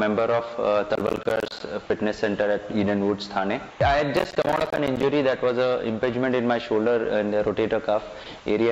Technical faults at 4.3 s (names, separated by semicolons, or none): processor overload crackle